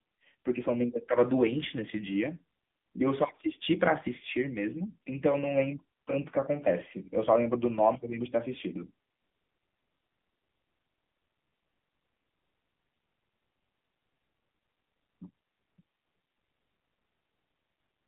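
All the way through, the speech has the AMR narrowband mobile codec sound: squeezed to about 200 Hz–3.5 kHz, buzzy and synthetic, which points to a low bitrate near 8 kbps.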